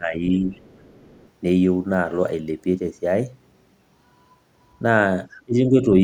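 Right at the start, from 0.0 to 0.23 s, the speech dips by around 10 dB for roughly a fifth of a second. That's speech suppressed in double talk. The likely cause is the echo canceller hearing both sides at once, failing to tell its own talker from the loudspeaker echo, and ducking everything. From 0.36 to 1.29 s there's a faint second voice underneath, about 35 dB down: the other side's voice leaking through. The likely cause is loudspeaker playback that the canceller didn't fully strip from the mic. It shows up again, louder at about 25 dB below the speech, in a short scrap from 5.33 to 5.42 s. The likely reason is the same incomplete cancellation. Right after, from 5.45 to 5.86 s, the speech gets pushed down hard, by around 25 dB over roughly a third of a second, which is more double-talk suppression. It's likely the canceller clamping down again as both ends overlap.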